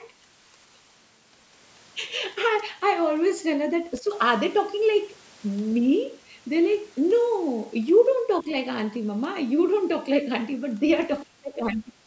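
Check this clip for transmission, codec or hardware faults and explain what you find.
Two kinds of echo-canceller fault are audible in the speech, both near call-style processing that keeps nothing above 8 kHz.

Speech suppressed in double talk happens three times: at 4.0–4.11 s, at 8.42–8.49 s, and at 11.27–11.95 s. The first two are brief dips of about 10 dB. The last cuts deeper, about 30 dB, for roughly 0.7 s. The likely cause is both sides talking at once. The echo canceller cannot tell the talker from loudspeaker echo, so it turns both down.

The other side's voice leaks through at 10.92–11.0 s. A faint second voice appears very low, about 30 dB under the speech. It is likely loudspeaker playback of the far end that the echo canceller failed to fully remove from the microphone.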